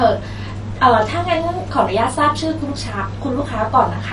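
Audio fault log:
Throughout: MP2 compression, likely from a low bitrate around 48 kbps; nothing above 11.2 kHz, upper sub-bands switching off, leaving dull speech with gurgling granular quantisation rather than smeared pre-echo.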